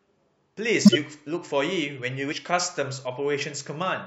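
A speech recording with a loud glitch from 0.85 to 0.96 s, the sign of a corrupt frame decoded: damaged bits across roughly four frames played back as misplaced energy. From 2.31 to 2.33 s the speech jumps ahead, where compressed frames were skipped and about 70 ms of audio went missing.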